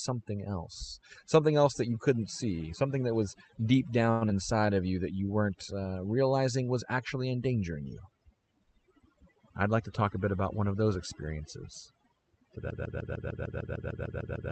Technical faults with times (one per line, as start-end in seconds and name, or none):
0.00-14.52 overdone noise removal
4.11-4.24 short stall from a late packet
4.29-4.33 short concealed packet loss
4.55-4.75 jitter buffer slow-down
9.07-10.02 jitter buffer speed-up
12.70-14.52 broken-record loop